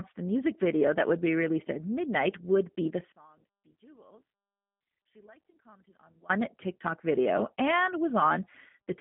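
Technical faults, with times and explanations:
Throughout, G.729 codec: The speech was squeezed through a low-rate VoIP codec, which fits 8 kbit/s, that rebuilds each frame from a vocal tract model and a few pulses. Nothing above 3.5 kHz or below 150 Hz survives, leaving a narrow, plainly rough, synthetic-sounding voice.
3.12 to 6.30 s, one channel inverted: The level suddenly drops by about 31 dB, leaving only a faint trace. The likely cause is one stereo channel flipping polarity, so the centred speech common to both sides cancels when they are summed to mono.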